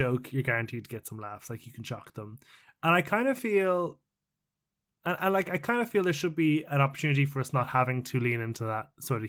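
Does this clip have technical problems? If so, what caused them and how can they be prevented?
No, nothing in this speech clip needs correcting, and the Opus voice coding it went through needs no preventive change.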